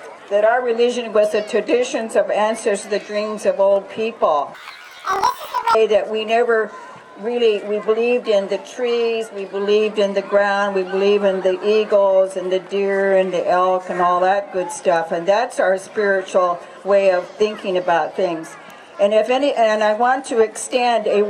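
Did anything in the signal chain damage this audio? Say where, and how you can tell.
Yes. Between 4.55 and 5.76 s the audio jumps an octave (12 semitones) up and carries a flutter at about 38 Hz, while the overall pace stays intact. That points to the sample-format conversion or buffer-handling stage: planar audio read as interleaved. Each block of about 26 ms held all left samples followed by all right samples. Reading them as alternating pairs played each channel's half at double speed in turn, which raised the pitch and chopped the sound at the block rate.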